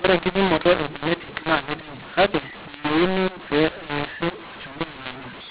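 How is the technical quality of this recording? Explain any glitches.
The technical quality is poor because of one decoding error that runs through the whole recording. Throughout, the audio shows a mu-law and A-law mix-up. The signal was written with G.711 mu-law but read back as A-law, so each 8-bit code is mapped onto the wrong logarithmic curve. Some sample levels come out too loud and others too quiet, and the quietest samples are pushed well above silence. The speech therefore sounds harsh and distorted, and the pauses fill with noise. The telephone band still stops at 4 kHz.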